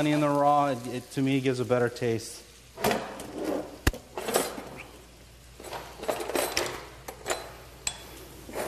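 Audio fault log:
Nothing stood out on listening to this audio.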